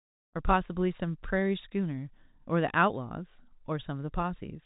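The speech carries the narrow telephone-band character of G.711 coding, with only faint quantisation noise riding under it, and a smooth fade-in eases the level up around the first half second, with no technical faults to be heard.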